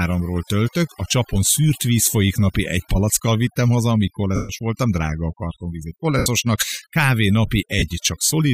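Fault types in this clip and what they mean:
overdone noise removal: Throughout the speech, a noise reducer pushed too hard keeps switching off individual frequency bands that sit near its noise estimate, taking soft parts of the voice along. The background drops and breaks up into twinkling specks.
lost LE Audio frames: At 4.36 to 4.49 s, after "palackkal vittem haza amíg", at 6.18 to 6.26 s, after "drága a kartonvíz egy", and at 7.79 to 7.82 s, the LC3 decoder covers missing Bluetooth frames by repeating the last spectrum with scrambled signs. Sound smears into noise, and the longest gap, 135 ms, fades toward silence.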